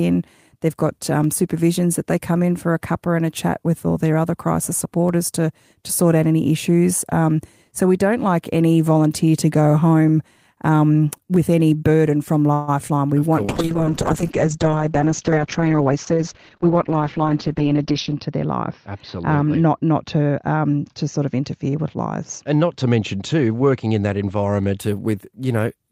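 It's a speech recording, and things go wrong just before the halfway mark. From 12.53 to 12.70 s the sound stretches into a fading buzz or hiss for about 0.14 s, then picks up exactly where it stopped with nothing lost. That's a call audio freeze, most likely from packets stalling in transit until the jitter buffer ran dry, which also adds roughly 143 ms of delay. Right after, at 12.88 to 12.91 s, there's a tiny smear where about 20 ms of audio never arrived. The decoder papered over it by carrying the previous sound forward briefly before blending back, which is classic short concealed packet loss. From 13.44 s to 24.84 s there's a call bitrate drop. The encoder falls from 32 kbps to 8 kbps and sits at the bottom for about 4.9 s, while the audio bandwidth shrinks from 20 kHz to 6 kHz, so the speech goes rough, watery and muffled until the rate climbs back. Overlapping that, from 15.30 to 16.19 s, you get a jitter buffer speed-up. 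Playback runs at about 110% with the pitch unchanged, because the receiver snipped out small pitch-period slices, about a tenth of a second in total, to drain a backlog of buffered audio, so that stretch sounds a bit rushed.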